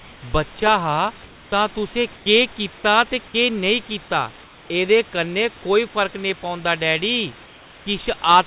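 In four speech pauses, at 1.24–1.52 s, 2.16–2.26 s, 4.44–4.70 s and 7.46–7.86 s, the room's real background gives way to comfort noise, likely because discontinuous transmission stopped sending audio while the far end synthesised a filler. Unlike a dropout or noise gate, the gaps never fall silent. The hiss continues but turns smooth and featureless, about 2 to 3 dB quieter, then the live texture returns with speech, all within the telephone band that ends at 4 kHz.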